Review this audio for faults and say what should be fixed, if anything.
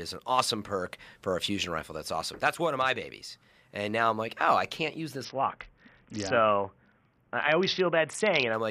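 From 5.25 s to 8.53 s, just after "oh I can't use", the speech loses its treble and picks up a gritty noise floor: a Bluetooth SBC bit pool drop. The sound points to the bit pool falling from 31 to 6, roughly 55 kbps, leaving the upper sub-bands with few or no bits and quantising the remaining bands coarsely. To prevent it, reduce congestion and interference on the Bluetooth link so the encoder never has to cut the bit pool that far.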